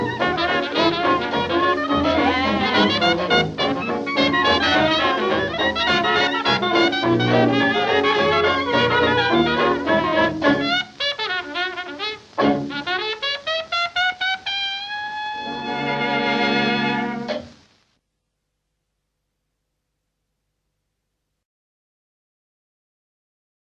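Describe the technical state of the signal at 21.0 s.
At 21.0 s the signal is intact, with no audible fault at that moment.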